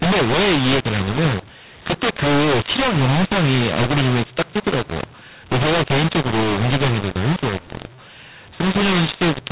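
Telephone speech whose A-law G.711 samples are decoded as mu-law throughout, a mu-law and A-law mix-up: the waveform shows distorted levels and noise-filled pauses, and the spectrogram shows broadband hash below the 4 kHz ceiling.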